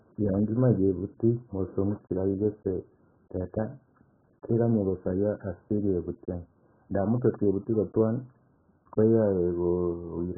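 Throughout, the speech is dull, smeared and warbly, with nothing above 1.8 kHz, so the spectrogram shows an empty top. This is likely heavy AAC compression, fitting a very low bitrate.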